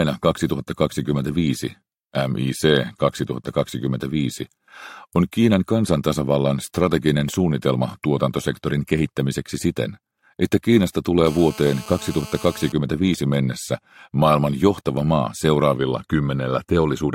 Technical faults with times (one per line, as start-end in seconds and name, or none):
11.26-12.72 GSM phone buzz